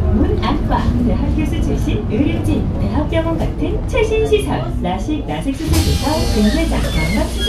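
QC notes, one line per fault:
No technical faults can be heard anywhere in the signal, which holds continuity throughout.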